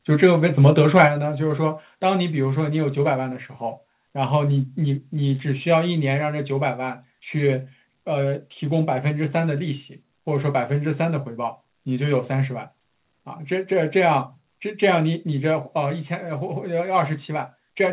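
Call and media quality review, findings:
Harsh, crackling edge on the loudest syllables, 0.64–1.05 s. Microphone overload, likely from input gain set too high: peaks exceed converter full scale by about 2 dB and their tops are flattened, with about 0.7% of samples clipped. Distortion sits in the narrowband speech that the G.711 A-law call path carries, with nothing above 4 kHz, so the crackle reads as gritty rather than bright.

Sudden drops in voice and background level together at 1.08 s (about 5 dB), 6.15 s (about 1 dB) and 15.0 s (about 1 dB). The microphone volume stepped down each time, likely a device input gain change by the call software's level control. The first cut follows directly on the clipped burst.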